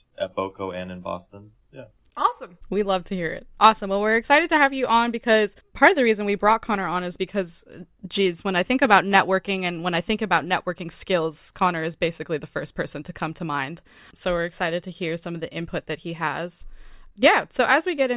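No audible technical faults.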